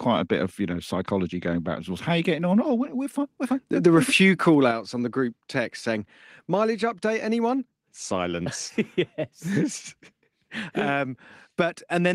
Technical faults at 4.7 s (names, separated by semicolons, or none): microphone volume stepped down